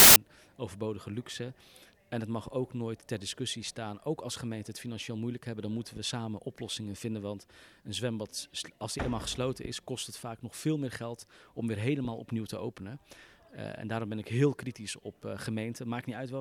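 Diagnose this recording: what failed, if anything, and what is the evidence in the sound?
The player failed at the storage and file-parsing stage, where a file tags block holding an embedded cover picture was played as audio. From 0.0 to 0.16 s, that compressed picture data comes out as a hard-edged burst of very loud white noise.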